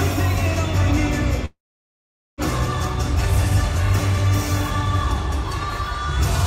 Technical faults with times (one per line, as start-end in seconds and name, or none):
1.45-2.41 call audio freeze